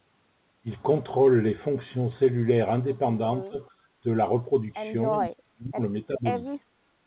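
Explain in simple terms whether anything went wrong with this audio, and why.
Speech suppressed in double talk, at 3.48–3.56, 5.21–5.8, 6.1–6.27 and 6.65–6.71 seconds: the voice dips or briefly drops out, most deeply around 5.2–5.8. Both sides likely talked at once, and the echo canceller, unsure what was echo, turned everything down.

Echo leak, at 5.12–5.19 seconds: a faint, short copy of the voice arrives about a third of a second late. A loudspeaker on one end likely let some sound slip back into its microphone that its echo canceller failed to remove.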